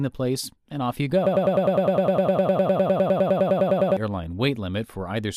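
A broken-record loop runs from 1.27 s to 3.97 s, right after "place and off you": a fragment of about 0.1 s repeats exactly, back to back, 26 times, giving a rapid stutter. The likely cause is a stalled player or stream resending its last buffered piece, so the speech meant for those seconds is lost.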